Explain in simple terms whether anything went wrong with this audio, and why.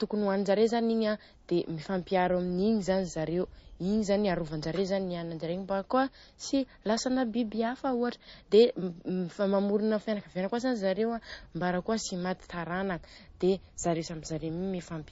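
Something did go wrong, and it lasts the whole recording. The speech sounds plainly watery and swirly, and nothing at all comes through above about 7.6 kHz, so s sounds lose their crisp edge. This is most likely MP3 compression squeezed too hard: the encoder ran short of data, chopped off the treble and kept dropping quieter detail from moment to moment. A dull microphone would just sound muffled; the swirling, bubbly texture is what points to MP3.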